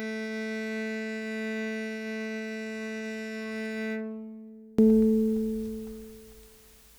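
A music clip whose first 4.79 seconds, from the start, collapse when heard in mono: the sound drops by about 34 dB, leaving a faint residue with the centred parts nearly gone, before full level returns. This is likely one channel inverted, so the material shared by left and right cancels on summing. Unlike a plain dropout or gain drop, which lowers everything evenly, here only the common content disappears while the weak channel-difference remains.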